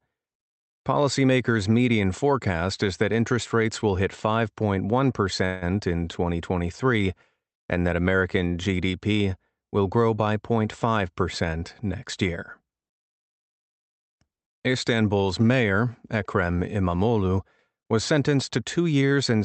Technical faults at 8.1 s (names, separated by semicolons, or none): none